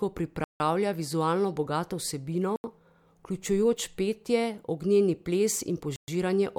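Blocks of digital silence at 0.44 to 0.60 s (160 ms, just before "vizualno bogato"), 2.56 to 2.64 s (80 ms) and 5.96 to 6.08 s (120 ms): the speech drops abruptly to silence, as when an output buffer goes unfilled, leaving short holes.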